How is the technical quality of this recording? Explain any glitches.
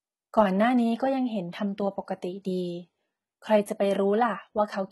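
The recording is heavily compressed throughout. The speech has a gritty, metallic top end, and s sounds come out lispy. Nothing is present above about 11.8 kHz. The likely cause is HE-AAC compression at a low bitrate, on the order of 16 kbps. That codec keeps only the lower spectrum and synthesizes the treble by copying lower bands upward under a coarse envelope, so the replicated harmonics don't align with the real ones.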